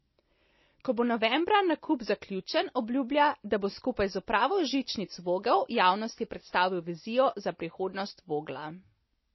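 Speech with MP3 compression damage throughout. Nothing is heard above 5.8 kHz. The sound is watery and swirly, which fits an MP3 encode at likely about 24 kbps.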